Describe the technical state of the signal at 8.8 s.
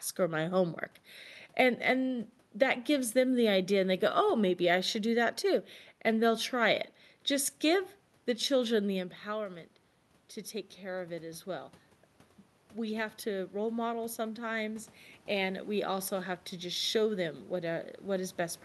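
At 8.8 s the signal is intact, with no technical fault; the level change around there comes from the talker shifting position relative to the microphone, not from the system.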